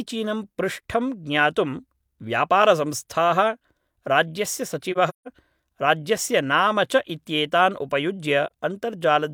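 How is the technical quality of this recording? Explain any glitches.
The speech drops out twice, once as a soft-edged hole and once as a brief dip.

From 4.92 to 5.28 s, just before "राज्यस्य नाम", the sound fades away in short gaps spread over about 340 ms, the longest around 150 ms and about 213 ms missing in all. At 8.46 to 8.51 s a single gap of about 43 ms fades out and back in. Both are AAC frame loss with muting: the decoder zeroed the spectrum of each lost frame, and the overlapping transform windows turn the silence into a gradual fade rather than a hard cut.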